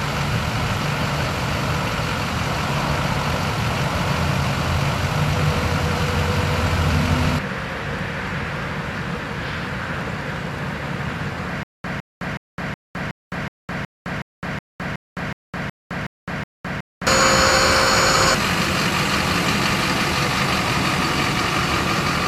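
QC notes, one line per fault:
11.63–17.07 s: stutter with silent gaps. Playback likely stalled and kept retrying, replaying the last fragment each time before running empty. A 159 ms burst repeats 14 times, once every 370 ms, with 210 ms of digital silence between repeats. The audio that should have played there is lost.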